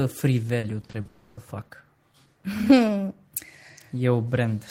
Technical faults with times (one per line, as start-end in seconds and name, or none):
0.59-1.07 repeated packet loss (robotic sound)
1.07-1.39 long network dropout